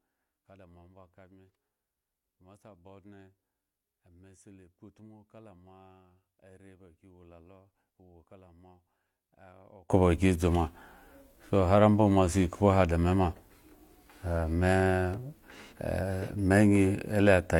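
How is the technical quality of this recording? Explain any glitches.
The recording has one clear fault in its first 9.9 seconds. From 0.0 to 9.90 s, the mono sum of the speech drops by about 30 dB, leaving only a faint residue. The likely cause is one channel inverted: with reversed polarity, the centred speech common to both channels cancels, and only their small differences survive.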